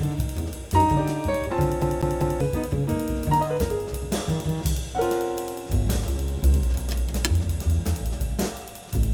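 At 1.82 s the audio catches on a CD stuck on one turn and stays caught until about 2.41 s. A scratch is kicking the laser back a track at the same point of each rotation, so a slice roughly 0.2 s long plays three times in a row, with a tiny mute at every jump. What you hear is that quick, evenly spaced stutter of a skipping disc before playback carries on.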